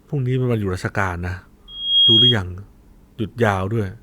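At 1.68 s a loudspeaker feedback squeal starts in the speech and holds until 2.38 s. A microphone is hearing the loudspeaker it drives, and at 3.3 kHz the loop gain tops one, so that tone feeds itself, swelling over roughly a third of a second to a piercing whistle about 10 dB above the speech. A spectrogram shows a bright, steady horizontal line at 3.3 kHz; the waveform's envelope fattens into a dense, sustained band.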